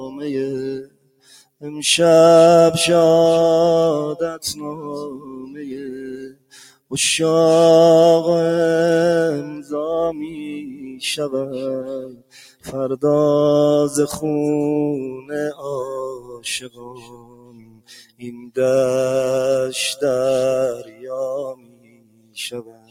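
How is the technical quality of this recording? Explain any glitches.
The quality is poor. A noise suppressor applied to music or sounds is active throughout. It treats steady material as noise, so levels swing by around 20 dB.

Sound cut by the noise suppressor occurs at 0.83–1.63 s, 4.29–6.92 s, 10.27–11.02 s, 12.06–12.69 s, 15.12–18.57 s and 20.84–22.9 s. Held and fading sounds sink by about 18 dB, or about 9 dB at 10.27 s.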